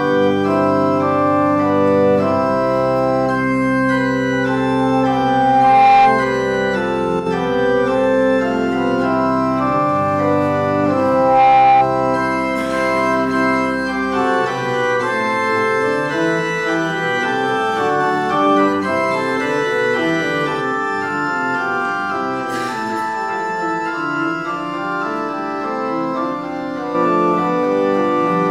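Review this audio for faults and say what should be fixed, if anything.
Loudspeaker feedback squeal occurs at 4.32–6.33 s and 11.01–11.90 s as a 796 Hz tone. The microphone is picking up its own loudspeaker, and at that frequency the loop gain exceeds one. The first squeal swells over roughly a second and a half to around 10 dB above the program. The second rises in under half a second to about 5 dB above it. To prevent it, reduce loop gain by moving or aiming the microphone away from the loudspeaker, lowering monitor level, or notching 796 Hz.

A brief level drop of about 6 dB runs from 7.20 to 7.26 s. This sudden fall in the mono sum is likely one channel dropping out for those 68 ms, which leaves only the other channel's share of the shared content. To prevent it, check the stereo cabling, connectors and channel routing.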